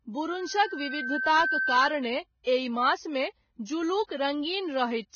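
A steady tone at 1.6 kHz rises out of the speech from 0.31 s, swelling over roughly a second until it sits about 5 dB above the talker, and holds until 2.07 s. This is a loudspeaker feedback squeal: the microphone was hearing the speaker it fed, and at that one frequency the loop gain passed unity, so the tone fed on itself. Throughout the recording, the speech is dull, with nothing above 6.5 kHz. The cause is likely low-bitrate audio saved at a high bitrate. The artefacts point to a heavily compressed first encode, later rewritten as a large MP3 that could not bring back the lost detail.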